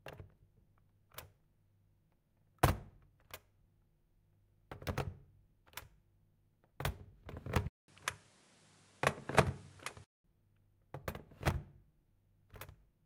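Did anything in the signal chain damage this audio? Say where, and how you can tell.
Yes. At about 7.68 s the sound drops out for 200 ms, then comes back duller, with nothing above about 11.9 kHz, a level shift of roughly 5 dB and a new noise floor sitting around 30 dB under the signal. It stays that way until about 10.24 s, then clears up again. That's the signature of an input switched to a poorer device, most likely at the driver or device-routing stage, with the system briefly hopping to a narrower-band microphone with its own gain and hiss.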